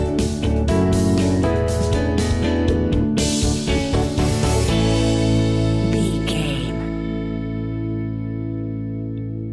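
No technical faults can be heard anywhere in the recording, with the signal holding steady and intact over its whole duration.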